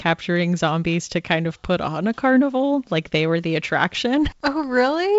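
The speech shows no technical faults, carried over G.722 wideband telephone coding at 56 kbit/s with nothing above 7.7 kHz.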